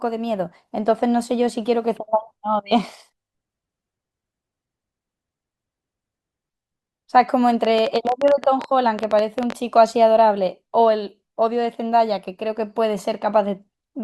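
Speech with a train of clicks from 7.65 to 9.53 s: about twenty same-shaped pops, irregularly spaced at roughly 10.7 per second and peaking about 10 dB above the speech. Their closely matching shape sets them apart from random crackle. The likely cause is interference or a faulty connection or power supply.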